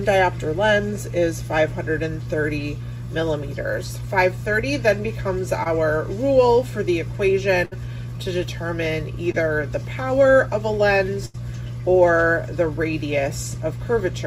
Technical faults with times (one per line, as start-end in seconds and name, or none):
5.63-5.67 short concealed packet loss
7.65-7.73 burst of packet loss
9.31-9.35 short concealed packet loss
11.25-11.36 burst of packet loss